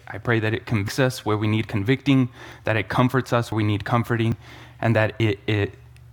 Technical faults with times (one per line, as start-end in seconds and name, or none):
0.88 dropped buffer (overrun)
2.52 dropped buffer (overrun)
3.52 dropped buffer (overrun)
4.32 dropped buffer (overrun)
5.20 dropped buffer (overrun)